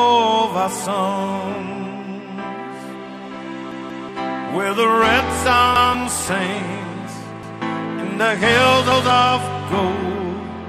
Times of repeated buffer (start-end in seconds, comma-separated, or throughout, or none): 3.72-4.09, 5.76-5.94, 7.43-7.62, 8.92-9.10